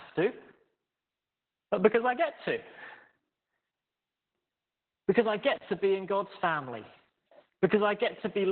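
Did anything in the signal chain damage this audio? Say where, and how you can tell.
Yes. Across the whole clip the speech sounds muffled, hoarse and slightly robotic, and nothing is present above about 4.4 kHz. The damage comes from the codec stage, specifically Opus voice compression. At a very low rate, consistent with roughly 8 kbps, Opus drops to its SILK linear-prediction coder and narrows the band to narrowband. It then codes the excitation so coarsely that the voice loses its natural texture, which produces the hoarse, synthetic quality heard here.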